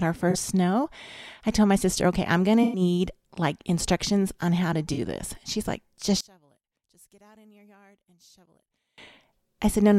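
AAC frame loss with concealment appears at 0.30–0.37 s before "snow I told my", 2.63–2.81 s after "okay I'm going to", and 4.93–4.99 s. Each is a smeared, noisy patch where the decoder filled the gap, rather than a clean silent gap.

From 6.21 to 8.98 s, after "like just", the speech drops by about 34 dB to a faint residue. This is likely one channel inverted, cancelling on the mono sum. Unlike a dropout, a faint difference signal survives.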